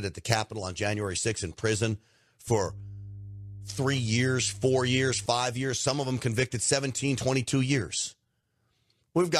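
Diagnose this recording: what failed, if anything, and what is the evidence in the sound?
A steady low tone at 50 Hz sits under the speech from 2.47 s to 5.26 s, roughly 15 dB below it. This is mains hum from the analogue wiring, where a ground loop or a nearby transformer let the power line leak into the signal.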